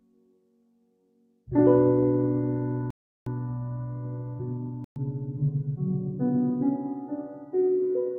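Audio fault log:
throughout: noise suppressor applied to music or sounds. A speech-tuned suppressor treats sustained content as noise, so level swings by roughly 20 dB, pumping rather than dropping out.
0.00–1.49 s, 5.19–5.35 s, 6.95–7.55 s: sound cut by the noise suppressor. Held material sinks by about 20, 6 and 13 dB, a gradual dip rather than hard silence.
2.90–3.27 s, 4.84–4.96 s: Bluetooth stall, likely. Playback drops to full silence for 360 and 117 ms, then resumes abruptly, unlike the suppressor's softer fades.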